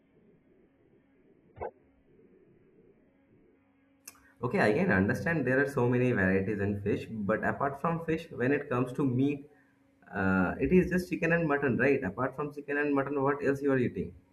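For the first 4.0 s the speech sounds like an adaptive stream starting at a low bitrate: the player opened on a cheap version of the stream to get going fast, then switched up once it had gauged the connection. Until that switch there's nothing above 4.5 kHz, so it's dull and smeary with stronger codec artefacts, which fits something around 8 kbit/s AAC. At 4.0 s it jumps cleanly, with no gap, to a better sound more like 96 kbit/s.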